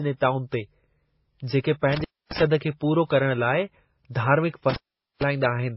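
Transcoding between lossy codecs, throughout: nothing sounds above 5.5 kHz, and smeared, swirly artefacts layer over one another, likely from a very low-bitrate MP3 re-encoded as WMA. Intermittent contact at 1.90 s: a loose connection opens for about 270 ms, dropping the speech with crackle at each edge, leaving faint hiss until "खे पूरो करणु" resumes. Intermittent contact again at 4.70 s: the line opens for about 449 ms, with the same edge crackle and hiss.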